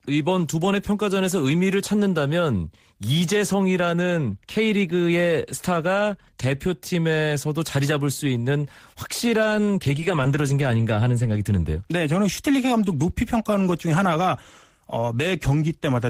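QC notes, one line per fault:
9.43 to 11.29 s, lost packet rebuilt from error correction: dozens of 10 ms packets were replaced by low-bitrate copies. The sound stays continuous but turns rough and grainy.
10.00 to 10.03 s and 10.24 s, short concealed packet loss: 10 ms never arrived. The decoder extended the preceding sound for 12 ms and 8 ms, leaving a brief smear.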